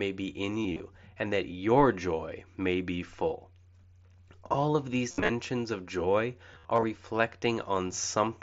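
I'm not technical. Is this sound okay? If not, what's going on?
No. The speech has three short stretches of concealed Bluetooth headset packet loss: 0.63 to 0.80 s, 5.11 to 5.29 s, and 6.53 to 6.83 s. Bits of sound from the headset went missing. The phone filled each gap by repeating a piece of the sound just before it. Longer gaps become a buzzy tone, with a small warble as the real speech comes back. The last stretch has the longest gap, about 52 ms.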